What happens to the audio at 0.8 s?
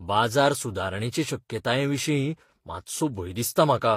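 At 0.8 s, as throughout, speech carries different codec artefacts heard together and is cut off above 16.3 kHz, likely transcoding between lossy codecs stacking one encoder's artefacts onto another's.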